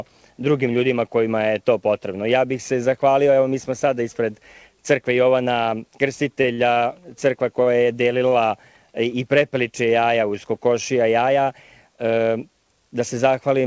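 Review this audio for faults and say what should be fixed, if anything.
The audio drags and stutters from 6.42 to 6.78 s: repeated stalls, four jitter-buffer underruns, each gap up to 51 ms, filled by continuing the preceding sound. Brief held sounds with a slight buzz or dip at 7.62 s and 8.28 s are short stalls from a late packet: each time the buffer briefly emptied, and about 40 ms was stretched before playback resumed. The audio's upper limit of 8 kHz fits a wideband call codec such as G.722. To prevent these stalls, give the jitter buffer enough target delay to absorb arrival delays of about 40 to 50 ms, or reduce network jitter on the path.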